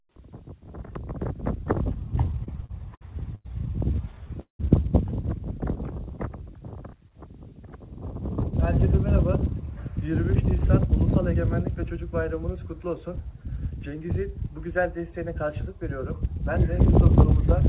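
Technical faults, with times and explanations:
2.44 to 4.61 s, repeated stalls (stutter): packets reached the receiver late or slower than playback consumed them, so the jitter buffer ran dry eleven times in about two seconds. Each gap was filled by continuing the last sound, with the longest wait, about 193 ms, faded. Roughly 470 ms of concealment covers about 22% of the span, yet nothing is lost; the audio simply drags and stutters through this stretch.
8.37 to 16.35 s, jitter buffer speed-up: the buffer was holding more audio than its target, so the receiver trimmed many short pitch-period-length pieces in succession to reduce the delay. Around 200 ms is removed over about eight seconds, raising the rate to 102% without shifting pitch. The result is a slight, steady speed-up, too small to sound hurried, heard through the G.711 call path, whose band stops at 4 kHz.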